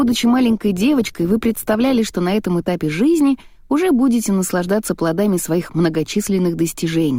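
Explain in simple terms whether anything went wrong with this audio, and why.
For the first 2.0 seconds the sound is dull and smeared, then at 2.0 s it abruptly turns clearer and brighter. That is an adaptive stream starting at a low bitrate: the player began on a thin, cheap version so playback could start quickly, then switched to a better one once it knew the connection could cope. Unlike a dropout or network glitch, nothing goes silent or stutters. The quality simply jumps up once.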